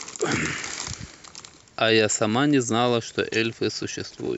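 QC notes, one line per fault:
No faults heard anywhere in this speech clip.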